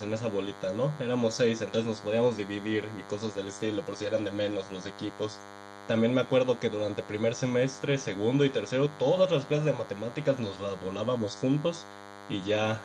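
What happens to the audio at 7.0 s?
At 7.0 s the speech carries a DECT cordless phone buzz, which runs through the entire clip rather than starting there. A nearby DECT handset or base transmits a brief radio burst every 10 ms, and the audio circuitry rectifies it, producing a thin, rasping 100 Hz buzz with a dense stack of harmonics, sitting around 20 dB below the speech. Unlike mains hum at 50 or 60 Hz, which is smooth and dominated by its low fundamental, this buzz is edgy and sharp.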